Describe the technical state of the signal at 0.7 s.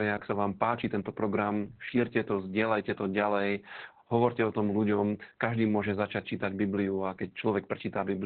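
At 0.7 s the speech carries Opus voice compression, present across the whole clip rather than at that instant alone. The sound is muffled, hoarse and faintly robotic, consistent with the SILK linear-prediction coder squeezed to narrowband at a bitrate around 8 kbps, where the excitation is coded coarsely. On a spectrogram everything above about 4.4 kHz is empty, a flat ceiling, while the waveform looks intact despite the heavy coding damage.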